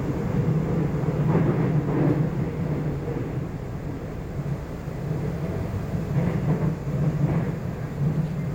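No technical faults can be heard anywhere in this audio.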